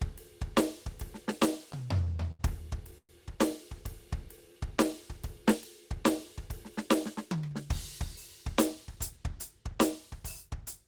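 From 1.59 to 2.41 s the music shows repeated stalls (stutter). Packets reached the receiver late, so its jitter buffer emptied seven times, with the longest wait 75 ms. Each gap is bridged by continuing the last sound, 137 ms in total, about 17% of the span. Nothing is lost, but the passage drags and judders.

At 2.98 s a call audio freeze lasts until 3.11 s: 111 ms of concealment in which the held sound fades out, with 70 ms of it silent, before the music resumes where it stopped. The likely cause is packets held up in transit, adding 111 ms of delay.

A jitter buffer slow-down runs from 3.87 to 4.67 s. To rebuild its reserve, the receiver repeated single periods of the waveform many times, adding 55 ms. The music plays at 94% speed at unchanged pitch, sounding stretched and slightly sluggish.

From 6.64 to 7.66 s a jitter buffer speed-up follows. The receiver held more audio than its target and trimmed short periods repeatedly, removing roughly 70 ms. 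The music plays at 106% speed at the same pitch, audibly hurried, and the tempo loses its steadiness.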